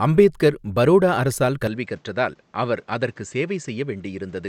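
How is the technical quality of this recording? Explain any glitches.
The big issue is a change in character partway through this speech. Right after "அம்பேத்கர் பரோடா அரசால்", at about 1.67 s, the sound turns duller and stays that way to the end. That's likely the input switching to a poorer device. Nothing comes through above about 8.4 kHz, the level drops by roughly 5 dB, and faint new background noise appears, well below the voice. There's no gap at the switch. The tone just shifts.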